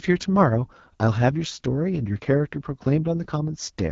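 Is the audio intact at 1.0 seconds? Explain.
No. At 1.0 s, as across the whole clip, the speech passes through the AMR wideband (HD Voice) codec at a rate that sounds like 8.85 kbit/s. The codec models the vocal tract from pulses up to 6.4 kHz and fills the top band with shaped noise, leaving nothing above 7.4 kHz. The rough, raspy texture distinguishes it from a plain low-pass filter.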